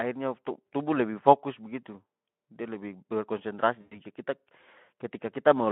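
At 3.81 s the speech breaks into VoIP packet loss concealed by the speech codec. It lasts until 3.99 s. About 100 ms of audio never arrived, which fits five lost 20 ms frames. The Speex decoder, working on a narrow 150 Hz to 3.4 kHz line, fills the hole by extending its last pitch and filter. The gain drops each frame. You hear a short buzzy or noisy smear that fades, not a clean gap.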